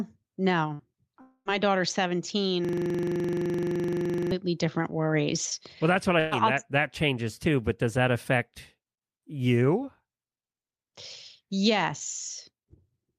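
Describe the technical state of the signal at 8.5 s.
At 8.5 s the speech signal is intact, with no audible fault at that point.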